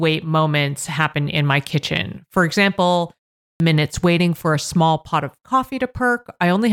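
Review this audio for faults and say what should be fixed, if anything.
The output device went to sleep during the 0.45 s pause and needed time to wake, causing a clipped start after a pause. About 40 ms of sound is lost from 3.56 to 3.60 s, so "minutes waiting for a" begins abruptly, missing its opening sound. Keeping the output stream active through pauses would prevent this.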